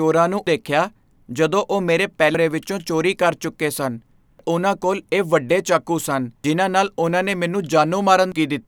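Damaged data in a compressed stream produces brief glitches at 0.47, 2.35 (between "ਜਦੋਂ ਉਹ ਮੇਰੇ" and "ਵਿੱਚੋਂ ਚੋਰੀ ਕਰ ਚੁੱਕੇ"), 4.39 (after "ਚੋਰੀ ਕਰ ਚੁੱਕੇ ਸਨ", before "ਉਨ੍ਹਾਂ ਕੋਲ ਇਹ ਵੱਡੇ"), 6.44 and 8.32 s. At each point, corrupted bytes made the decoder misread a frame and resynchronise. A spectrogram shows a narrow vertical smear of broadband energy breaking the speech harmonics. The waveform shows a sudden spike or discontinuity.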